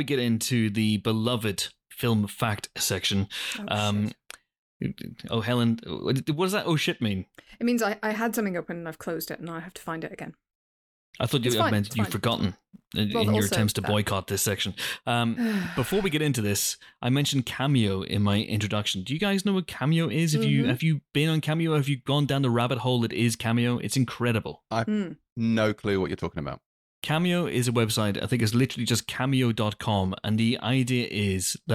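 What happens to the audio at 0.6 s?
Nothing goes wrong at 0.6 s; the speech carries on intact through that moment with no audible fault.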